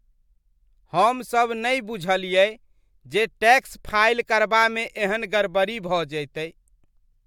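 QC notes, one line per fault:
No audible faults anywhere in the speech.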